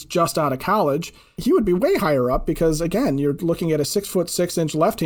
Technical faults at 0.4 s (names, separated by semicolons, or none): none